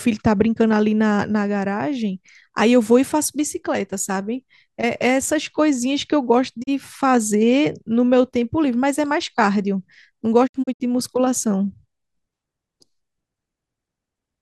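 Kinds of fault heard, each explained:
Digital broadcast dropout: the receiver mutes when frames fail, so speech fades out over 20 ms and resumes with material lost. At 6.62 s there is one 32 ms hole; from 10.46 to 10.82 s, several holes totalling 160 ms. Clean silence, not hiss or smeared concealment, marks it.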